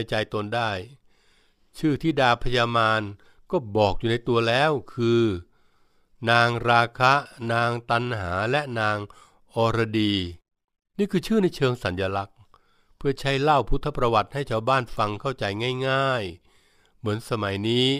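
No technical faults can be heard anywhere in the speech recording; the signal holds steady throughout, with nothing that points to a problem in capture, processing or playback.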